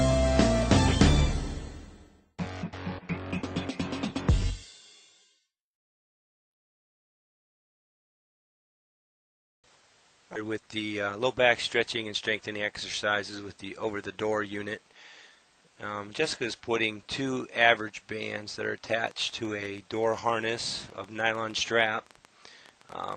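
At 10.35 s the receiver threw away a stretch of audio, about a second's worth, while later audio was already queued. This is a skip ahead: playback lurches forward by about a second with no gap filled, the two sides of the cut joined almost directly, so a chunk of the sound simply vanishes.

Right after, the jitter buffer was holding more audio than its target and trimmed short pitch-period pieces to catch up. This jitter buffer speed-up runs from 10.92 to 11.49 s at 118% speed, briefly from 12.53 to 12.60 s at 163%, and from 13.86 to 14.66 s at 106%. The pitch stays the same, but the sound is hurried, most clearly in the first two stretches.

From 19.07 s to 23.14 s a train of clicks rides over the audio: around forty pulses of much the same shape at an uneven pace averaging about 8.6 per second, roughly as loud as the sound itself and audible in pauses too. The source is likely interference from nearby equipment or a faulty connection or power supply. 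Through all of this, the call codec's top end stops around 12 kHz.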